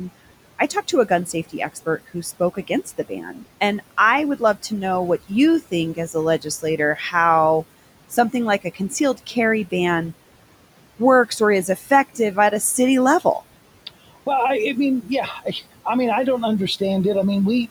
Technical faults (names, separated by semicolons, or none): noise suppressor artifacts; speech cut by the noise suppressor